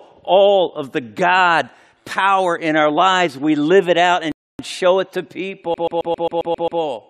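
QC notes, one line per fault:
4.32–4.59 s, rebuffering stall: Right after "live it out" the audio drops to dead silence for about 0.27 s, then picks up cleanly with "show it to" at exactly the point where it stopped. The player drained its downloaded audio and had to wait for more data before continuing. Because playback simply paused rather than skipping ahead, no sound is missing, but the gap stretches the timing and breaks the rhythm of the phrase.
5.74–6.81 s, CD stuck on one turn: Shortly after "show it to", a 134 ms slice of audio repeats eight times in a rapid, evenly spaced stutter, each repeat separated by a brief mute. A scratch on the disc makes the laser jump back one track at the same spot on every revolution, so it rereads the same short fragment over and over. The steady repeat rate is what gives this fault its mechanical, machine-gun character.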